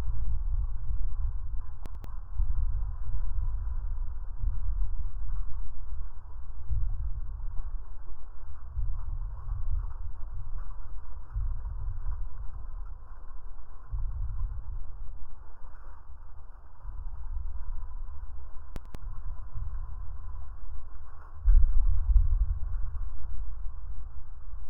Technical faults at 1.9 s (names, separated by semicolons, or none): chunks out of order